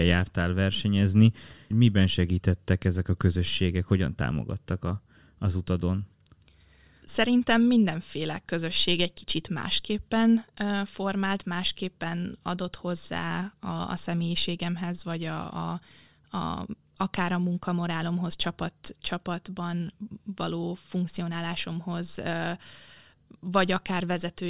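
No technical faults can be heard anywhere in the recording.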